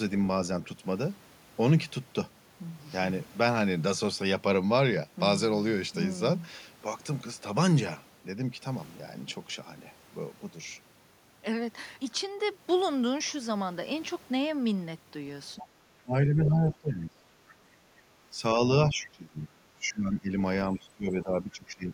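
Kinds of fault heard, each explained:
Other side's voice leaking through: a second voice appears in a brief scrap at 15.59 s and again from 16.44 to 16.93 s, the latter only about 10 dB under the talker. This is likely loudspeaker echo the echo canceller left in the microphone signal.
Speech suppressed in double talk: the talker's level drops in pieces, by up to about 20 dB, across 15.6 to 17.92 s, 18.31 to 20.33 s and 20.71 s to the end. The likely cause is the echo canceller attenuating near speech along with echo while both sides talked.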